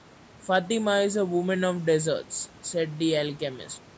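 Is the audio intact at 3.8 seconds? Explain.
Yes, the audio is intact at 3.8 seconds; the smooth fade-out that begins at about 3.81 s is a clean editorial fade with no click or hard edge.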